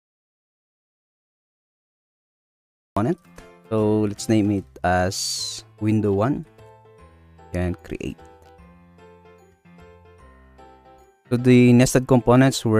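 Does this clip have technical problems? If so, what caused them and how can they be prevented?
Yes. There's an audio dropout to silence from the very start until about 2.97 s: the clip opens in silence, no room tone, and the sound only comes in mid-flow after that. Most likely the input was disconnected or muted while the recorder kept writing silence. Check connections and mutes, and monitor input levels before rolling.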